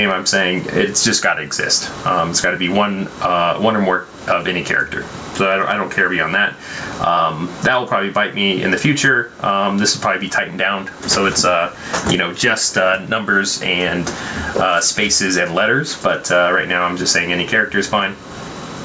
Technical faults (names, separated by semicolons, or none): gain pumping